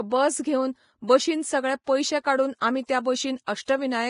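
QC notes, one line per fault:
Throughout: Vorbis compression, heavy. There's nothing above 10.5 kHz, and the remaining treble in the speech comes across hissy and grainy, with a rough edge on voiced sounds and softened consonant attacks. That's the codec quantising the upper residue so coarsely that real detail turns into noise of similar energy. The damage points to a low bitrate around 29 kbps, and Vorbis is the likely culprit.
1.84–1.87 s, 2.60–2.62 s, 2.86–2.89 s: pre-echo. The first comes right after "बस घेवन बशीन सगळे" and before "पयशे काडून आमी त्या", the second after "बशीन सगळे पयशे काडून" and before "आमी त्या", and the third just after "सगळे पयशे काडून आमी". Each sharp onset gets a short hiss ahead of it, spreading back 33 ms, 20 ms and 29 ms respectively, so the attacks sound smeared. The block's quantisation noise, sized for the loud attack, leaks into the quiet bit before it.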